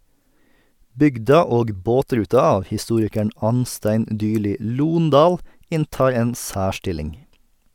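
No dropouts, clicks, glitches or other technical faults turn up anywhere in this recording of speech, so there's nothing to flag on that front.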